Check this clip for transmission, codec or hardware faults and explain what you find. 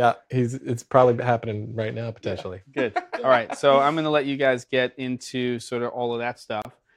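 One fault is audible, a gap at a join of encoded pieces. From 6.62 to 6.65 s, the sound drops out for about 30 ms. Separately encoded sections were joined untrimmed, so encoder start delay and final-frame padding remain. The silence has smeared edges, and the sound resumes where it stopped.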